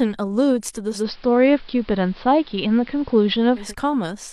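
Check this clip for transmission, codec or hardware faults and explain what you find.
One fault is present. From 0.87 to 3.75 s, digital radio blends to analogue AM. The receiver cross-fades over 218 ms. Audio dulls, shifts about 4 dB, and gains faint hiss.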